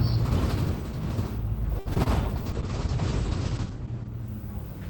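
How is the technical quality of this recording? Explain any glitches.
The recording has a cluster of network glitches around the two-second mark, followed by a long stretch of degraded coding.

A short stall from a late packet occurs at 1.79 to 1.88 s. A packet arrived after it was due, so the jitter buffer emptied and the receiver held the last sound for about 64 ms until the data turned up, then resumed exactly where it left off. Nothing is lost, but the sound lingers unnaturally, with a faint buzzy sustain and a small dip, and everything afterward runs about 64 ms later.

Short concealed packet loss follows at 1.94 to 1.98 s and again at 2.04 to 2.08 s. Each time, audio failed to reach the decoder in time: about 40 ms in the first case and 20 ms in the second. The receiver bridged each gap by extending the preceding sound, roughly 18 to 19 ms of invented fill, before blending back in. 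Each is heard as a brief smear or wobble. The first also takes back some of the earlier delay, about 20 ms.

A call bitrate drop runs from 2.47 to 4.16 s, with the worst quality held for about 1.6 s. The connection's bandwidth estimate fell, and the encoder was pushed to spend far fewer bits. The sound points to a fall from around 32 kbps to around 9 kbps. The audible bandwidth shrinks from 20 kHz to 8 kHz, so the sound turns muffled, rough and watery until the rate recovers.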